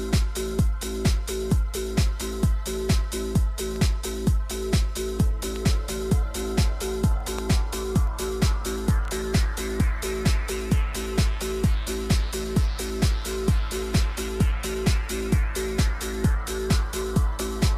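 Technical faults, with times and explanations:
3.81 s, audio missing between chunks: a brief skip where roughly 7 ms of sound vanishes and the two sides butt together without a gap, giving a small jump. The likely cause is a chunk handover in processing that works in 6-second chunks.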